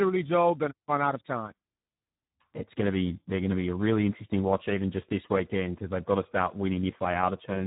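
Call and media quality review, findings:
Speex codec, whole clip, heavy damage. Speech hoarse, noisy, edging toward robotic; thin excitation at a setting consistent with roughly 8 kbps narrowband mode. Spectrogram: hard ceiling at 3.8 kHz, empty above; harmonics smeared into grainy noise below. Waveform: blurred transients, rough envelope. Component: CELP encoder at low quality.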